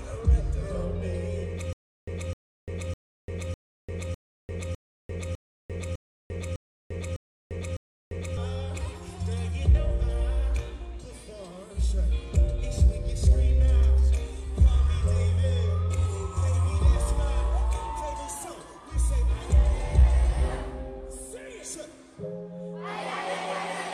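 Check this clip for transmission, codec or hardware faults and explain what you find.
One fault is present. From 1.73 to 8.37 s there is a stutter with silent gaps. The same 257 ms burst repeats eleven times every 604 ms, with 347 ms of digital silence between repeats. The likely cause is a stalled stream replaying its last fragment. On a waveform this appears as identical blocks separated by flat silent stretches.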